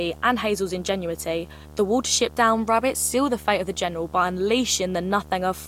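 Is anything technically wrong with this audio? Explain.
Yes. Throughout the speech, a video or display buzz at 75 Hz with hash above it sits around 20 dB below the voice, caused by a screen or video cable coupling into the audio at its field rate.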